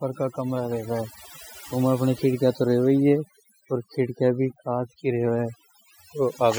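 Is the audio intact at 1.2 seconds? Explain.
No. At 1.2 seconds the speech carries overdone noise removal, present throughout the clip. An over-aggressive noise reducer is shutting off individual frequency bands near its noise estimate, taking quiet voice detail along. The background drops and breaks up into twinkling specks. A spectrogram shows scattered isolated dots in place of a continuous noise floor, with gaps inside the voice's fainter harmonics.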